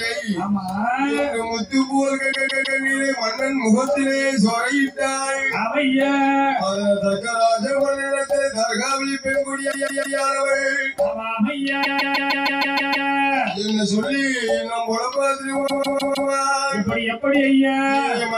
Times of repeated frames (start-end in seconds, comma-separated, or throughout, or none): 2.31-2.78, 9.71-10.18, 11.82-13.08, 15.66-16.29